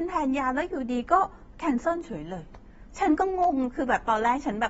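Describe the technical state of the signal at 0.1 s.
At 0.1 s the speech already carries AAC compression damage, which runs through the whole clip. Nothing reaches above 7.7 kHz, and the band below sounds dull and smeared, with a fizzy, warbling edge on sibilants. The likely cause is AAC-LC coding at a bitrate that points to around 24 kbps, too few bits for the encoder's hearing model to keep the top band or fill the gaps cleanly. A spectrogram would show a flat ceiling at 7.7 kHz.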